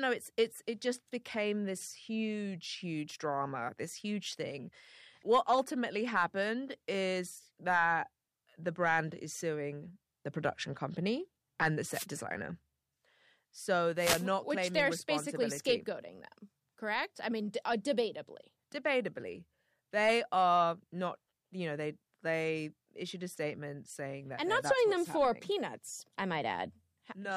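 A short swish of static cuts across the speech at 11.91 to 12.06 s, then a longer burst at 13.96 to 14.26 s. These are wireless microphone noise hits: the FM radio link faded as reflections cancelled, letting receiver noise surge over the voice.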